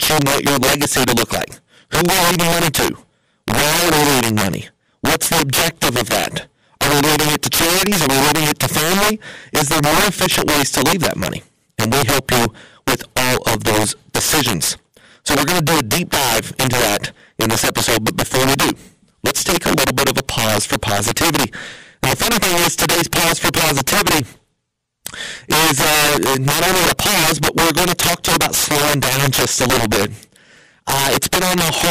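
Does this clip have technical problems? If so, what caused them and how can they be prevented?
Yes, there's integer overflow running through the whole speech clip: the signal is driven about 14 dB too hot, and the loudest few percent of samples wrap to the opposite sign instead of being limited, giving harsh cracks on peaks. Saturate or limit before converting to integers.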